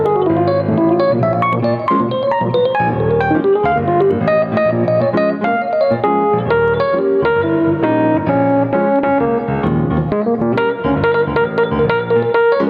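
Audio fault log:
throughout gain pumping: input gain likely set far too high, so a fast limiter or compressor clamps down on every loud sound and releases in the gaps. Level swings by about 10 dB, squashing the dynamics.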